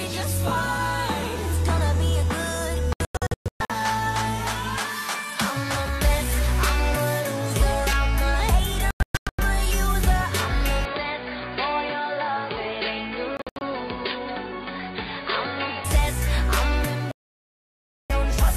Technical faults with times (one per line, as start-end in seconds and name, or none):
2.93-3.70 digital broadcast dropout
8.91-9.39 digital broadcast dropout
10.85-15.85 input switched to a poorer device
13.37-13.62 digital broadcast dropout
17.11-18.10 digital broadcast dropout